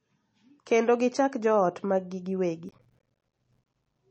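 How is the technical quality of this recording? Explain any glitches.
Poor, with two faults in the speech. One is present throughout and one is a burst of crackle near the end.

MP3 compression, heard throughout, is the likely cause of the dull, watery character. The encoder seems to have been starved of bits, which fits a low bitrate around 32 kbps. It cut everything above 8.3 kHz and let weak frequency lines flicker on and off. The result is muffled, swirly speech with smeared attacks.

Processor overload crackle runs from 2.69 to 3.99 s. The processor fell behind and missed a long string of small audio buffers, consistent with buffers of around 5 ms, well over a hundred of them. Each miss dropped a tiny slice to silence with hard edges. Together these gaps form a gritty, tearing crackle across the speech.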